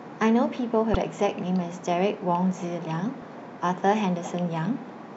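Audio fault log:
0.92–0.97 s, damaged data in a compressed stream: a brief glitch of about 50 ms breaks into the speech. Corrupted bytes in the encoded stream made the decoder misread those frames and lose sync until it found the next valid frame header.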